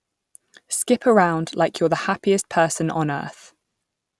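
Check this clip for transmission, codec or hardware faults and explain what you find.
Nothing stood out on listening to this speech clip.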